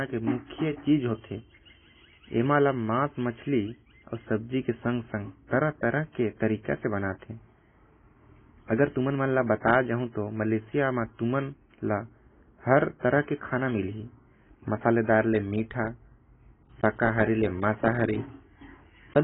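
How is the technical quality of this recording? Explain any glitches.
Quality is poor. The speech is heavily band-limited throughout, and a high whistle runs under it for most of the clip.

AAC compression affects the whole recording. Nothing is heard above about 3.8 kHz, so the speech sounds dull and smeared. Sustained sounds and sibilants warble and fizz. This is likely heavy AAC-LC coding at a low bitrate, about 16 kbps.

A feedback whistle runs from 0.0 to 15.39 s. It is a thin tone at one pitch, 5.7 kHz, about 20 dB below the speech, swelling and fading slowly in level. A loudspeaker likely fed back into the microphone, holding one frequency near the point of feedback.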